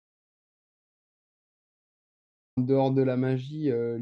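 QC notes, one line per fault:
0.0–2.57 s, audio dropout to silence: the clip opens already in digital silence, and the speech comes in abruptly at 2.57 s. The input was likely lost while silence kept being written. The waveform shows a flat line and the spectrogram is empty, with no room-tone floor.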